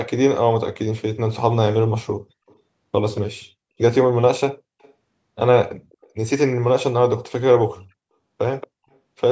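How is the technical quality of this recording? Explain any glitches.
Faint, delayed repeats of the speech surface in short scraps, an echo leak, heard at 2.47–2.56 s, 3.15–3.21 s, 4.81–4.93 s, 5.91–6.09 s, 8.61–8.67 s and 8.93–8.98 s. Each trails the speech by 228 ms. Most sit far below the speech, around 35 to 40 dB down, while the ones at 3.15 s and 8.61 s are noticeably stronger. The likely cause is a loudspeaker on the far end whose echo canceller let part of the pickup slip back into the call. The audio also stops at about 8 kHz, as expected from call microphone processing.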